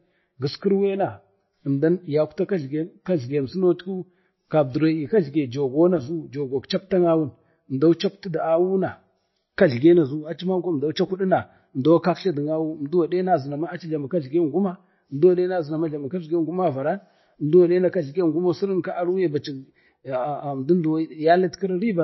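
From start to finish the speech has a hard ceiling at about 5.8 kHz, so the s and f sounds come out dull and lispy, and there's a watery, swirling quality in the background of the voice. That's likely MP3 compression at a low bitrate, somewhere around 25 kbps. The encoder runs short of bits, chops the top off at a fixed point, and lets weak frequency lines drop in and out between frames, which gives you that warble and smears the consonant attacks.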